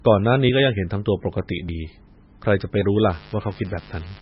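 From the start, the speech sounds watery and swirly, with a dull top end and nothing at all above about 5.6 kHz. The s sounds come out as metallic chirps, and consonant onsets smear. This is likely heavy MP3 compression. Starved of bits, the encoder chops off the treble at a fixed cutoff and drops quieter frequency lines, which flicker in and out between frames. The damage is severe enough to point to a very low bitrate, near 20 kbps.

At 2.94 s a steady, raspy buzz starts and continues to the end of the clip, sitting about 25 dB below the speech. This is mains buzz at 50 Hz. Sharp switching spikes from a dimmer, a rectifier or a missing shield get into the signal path twice per mains cycle. That produces a dense series of 50 Hz harmonics stretching well into the kilohertz range, which gives the buzz its gritty edge.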